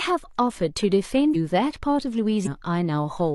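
At 1.30 to 1.35 s and again at 2.42 to 2.47 s, compressed frames are skipped: the speech jumps ahead by roughly a third and roughly 0.4 of a second, consistent with several 46.4 ms frames being dropped.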